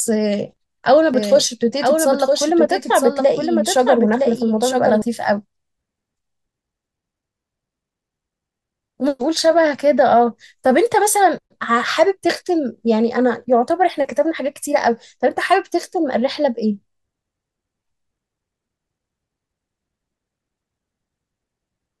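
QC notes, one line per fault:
1.14 to 5.02 s, doubled audio track: the speech gets a second full-band copy trailing about a second behind, sitting around 5 dB under the original, so you hear everything twice at a fixed gap. The copy is bone dry, with no decay or room colour, and it cuts in and drops out abruptly at both ends. That points to a likely second capture through a slower path, or an edit leaving two out-of-step copies stacked.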